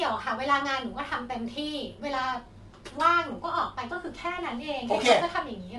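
Low-delay AAC compression runs throughout the speech, audibly roughening it: voices sound grainy, with noise filling the gaps between harmonics, and nothing above 11.6 kHz. Short coding frames likely resolve pitch structure poorly, consistent with AAC-ELD at roughly 32 kbps.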